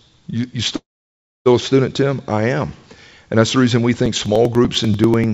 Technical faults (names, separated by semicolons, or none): call audio freeze; periodic USB or driver dropouts